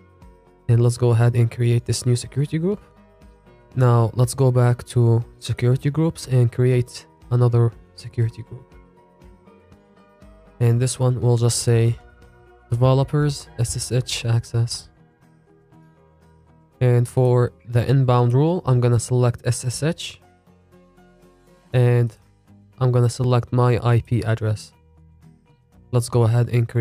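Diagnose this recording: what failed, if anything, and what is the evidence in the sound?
Buffer stage. Clicks recur every 4.26 s, from 1.94 s to 23.24 s. Likely clock drift buffer slips: mismatched device clocks force short blocks of samples to be dropped or repeated.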